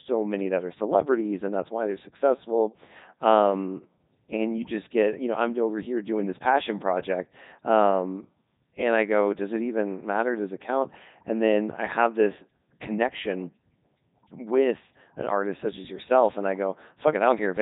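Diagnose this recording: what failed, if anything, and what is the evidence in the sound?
The speech is robotic and buzzy from start to finish, with a synthetic, sine-built tone rather than a natural waveform. This is a codec failure: the Codec 2 vocoder. Only pitch, voicing, energy and a coarse spectral envelope survive, and the decoder rebuilds the voice from sinusoids, so breath, texture and fine detail are gone. The damage is heavy, which fits Codec 2's top 3.2 kbit/s mode.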